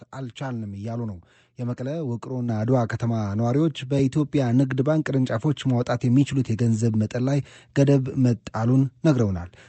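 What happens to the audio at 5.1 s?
At 5.1 s nothing goes wrong: the speech carries on intact through the call path, with only the usual coding of an Opus link limited to about 8 kHz of bandwidth.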